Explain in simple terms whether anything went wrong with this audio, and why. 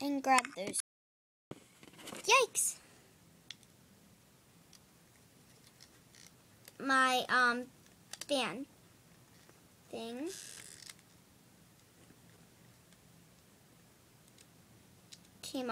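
The input signal likely dropped out briefly, an audio dropout to silence: from 0.80 to 1.51 s the sound stops dead, leaving total silence for about 0.71 s.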